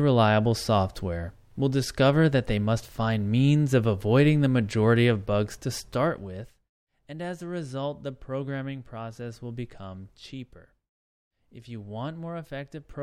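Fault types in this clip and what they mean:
Zipper noise: a level change made in audible increments rather than a continuous ramp, so each small jump puts a tiny click into the waveform. Just after "majority of bugs to", from 5.76 to 6.72 s, the speech drops by roughly 10 dB in around thirty steps a second, and a fine ticking rides on it until "and as a result". A smooth fade shifts loudness with no such granular rattle.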